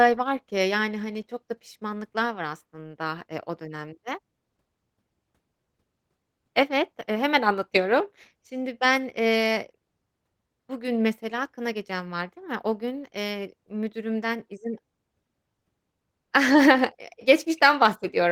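Nothing stood out on listening to this speech recording.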